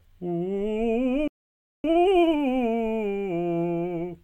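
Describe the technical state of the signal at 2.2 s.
At 2.2 s the music is in a time-compressed catch-up from 1.84 to 2.40 s, played at 2.0x by splicing out short pieces, sounding hurried at normal pitch.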